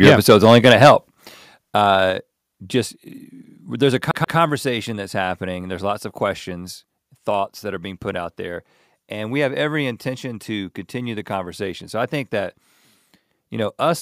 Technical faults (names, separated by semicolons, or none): microphone overload; microphone volume stepped down; CD stuck on one turn